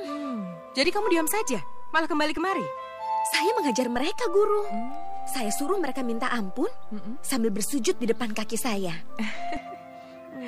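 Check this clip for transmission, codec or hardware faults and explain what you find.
The clip has a DC step fault, occurring twice. The waveform's zero line shifts by about -29 dBFS from 0.85 to 2.37 s and again from 3.96 to 9.57 s, returning to centre after each. This is the behaviour of a converter recalibrating or an offset-carrying input being switched in and out. Each onset and release produces a low thump or click, while the sound itself carries on unchanged underneath.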